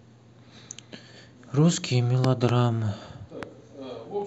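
Loud pops break into this speech clip between 2.24 and 2.51 s, where two sharp hits arrive in quick succession, and again from 3.43 to 3.45 s as a single hit. The first pair peaks about 15 dB above the speech and the later one about 10 dB. Each is most likely a sudden voltage pulse from a plug, switch, static discharge or driver glitch, added on top while the speech continues underneath.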